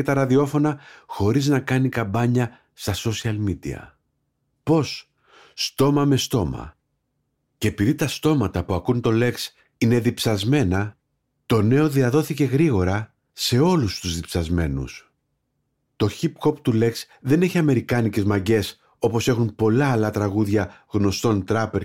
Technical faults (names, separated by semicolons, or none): none